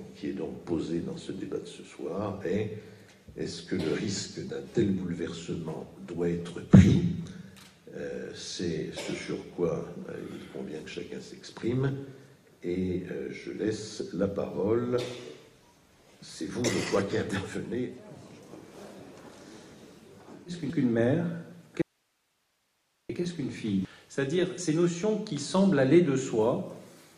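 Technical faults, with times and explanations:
21.82–23.09 s, audio dropout to a faint residue: the sound cuts out abruptly for about 1.3 s, leaving only hiss roughly 45 dB below the normal level, then returns mid-flow. This is likely a brief loss of the source while the downstream path stayed live.
23.85 s, damaged data in a compressed stream: a short blip where corrupted bytes in the encoded stream make the decoder misread a frame and lose sync. It then resynchronises on the next valid frame header.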